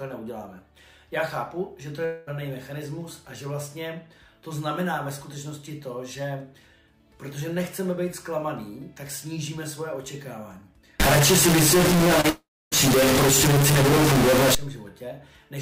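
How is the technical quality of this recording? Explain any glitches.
The recording has several audible glitches, all but one clustered between 11 and 15 seconds.

From 2.05 to 2.29 s, and again from 12.30 to 12.74 s, there is a long network dropout. The likely cause is audio never arriving, so the receiver stretches the last sound into a fading buzz. The second gap decays into roughly 0.27 s of silence, a blank column on the spectrogram, and then the audio resumes with that stretch missing.

From 11.00 to 14.55 s a stuck bit adds grainy noise or harsh, buzzy distortion, depending on which bit is stuck, likely from a faulty data line or converter. On the waveform the samples look offset in a jagged pattern. On the spectrogram, broadband grit fills even the quiet moments.

At 12.21 to 12.26 s, a short concealed packet loss of about 20 ms is covered by about 31 ms of synthesized continuation and then blended back. 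It is heard as a brief smear or wobble, and it shows as a slightly blurred vertical sliver.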